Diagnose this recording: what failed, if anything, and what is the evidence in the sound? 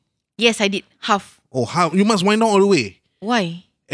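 Nothing failed at any stage of the chain; the speech carries no audible fault.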